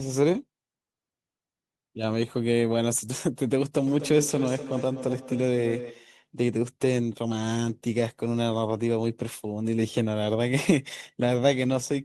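Speech with feedback echo between two devices from 3.87 to 6.18 s. A second device in the room replays the signal into the microphone, so repeats about 300 ms apart, up to about -10 dB, come back thinner and ringing. A spectrogram shows evenly spaced, fading copies of each syllable.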